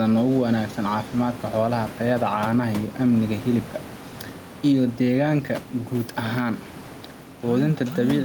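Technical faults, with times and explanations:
Throughout, gain pumping: the input gain is likely set far too high for the microphone, so a fast limiter or compressor clamps down on each loud stretch of speech and lets go in the pauses. The level swings by around 5 dB. The room noise sits about 16 dB below the speech. Loud and soft parts are pressed closer together, leaving the speech squashed.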